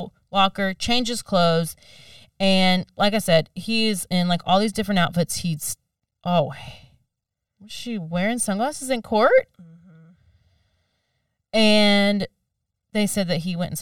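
Speech with channel delay (comb filtering) throughout: one channel lags about 1.5 ms before the mono sum, cancelling near 300 Hz and regularly upward, which shows as steady horizontal notch stripes on a spectrogram.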